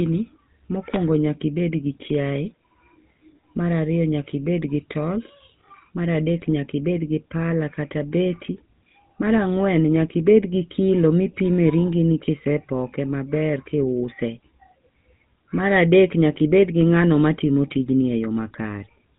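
From start to finish the speech has been through the GSM full-rate codec, and the damage is plainly audible. The codec rebuilds the voice from a vocal-tract model fed by sparse, regular pulses, so it comes out buzzy and gravelly. Nothing survives above about 3.8 kHz, which fits the 13 kbps full-rate mode.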